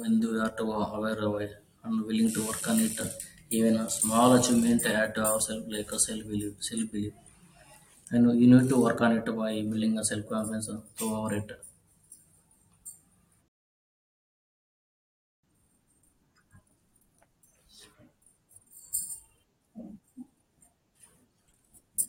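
At 13.48 s the speech cuts to silence and stays silent until 15.43 s, then carries on exactly where it broke off. This is a rebuffering stall: the player used up its downloaded audio and paused playback until more data arrived. No speech is lost or skipped, but about 1.95 s of dead air is inserted, so the gap sounds like an abrupt halt mid-flow rather than a natural pause.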